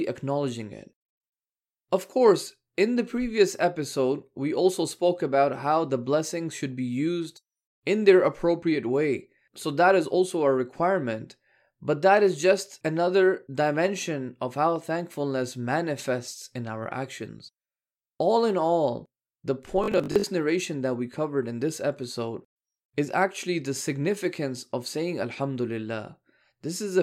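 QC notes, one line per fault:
19.84–20.24 s, robotic sound from repeated short buffers: right after "in all the", the speech collapses into a rigid, metallic buzz at 50 Hz that still loosely tracks the syllables, then clears before "narration that we covered". The likely cause is audio arriving too seldom, so playback repeats the last 20 ms fragment to fill the gap. Roughly half of this span is repeated material, and the looping imposes a fixed pitch at one over that 20 ms length.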